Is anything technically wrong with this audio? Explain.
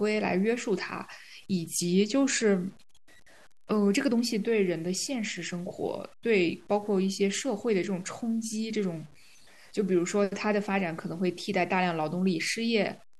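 Yes. Low bit depth without dither runs through the whole speech clip. The likely cause is truncation to very few levels, which fits 8-bit samples. The error tracks the signal, so quiet passages turn gritty, with grainy distortion roughly 30 dB below the speech.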